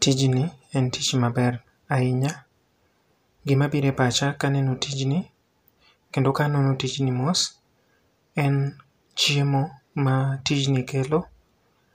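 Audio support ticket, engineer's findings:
No faults found on listening.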